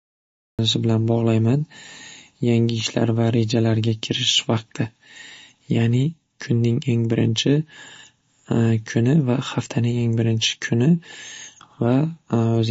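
The clip opens with a cut-off start. There's digital silence until about 0.59 s, then the speech drops in already mid-sound, with no natural attack or fade-in. It's as if the recording or stream only began capturing after the talker had started.

Throughout, everything above 7.5 kHz is simply gone, so the speech sounds dull. There's a plainly audible watery, swirly texture, smeared consonant onsets and metallic chirps on the s sounds. That's likely MP3 compression starved of bits, which fits a low bitrate of around 33 kbps.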